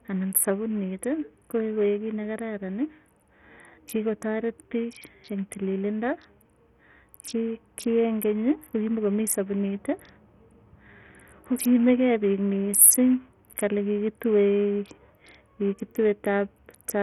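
Bluetooth SBC compression, throughout: nothing sits above about 14.8 kHz, and the speech carries a gritty, coarse texture with flickering treble and aliasing. This is likely a Bluetooth link starved of bits, which fits a rate near 48 kbps, where coarse sub-band quantisation leaves the top bands underfed.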